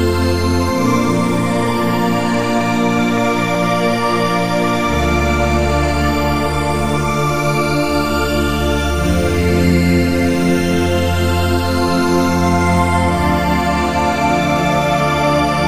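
A short run of CD scratch ticks sits between 2.23 and 3.74 s: nine clicks at roughly six a second, the longest only about 2 milliseconds. A blemish is defeating error correction once per disc revolution, so the player patches or mutes those samples.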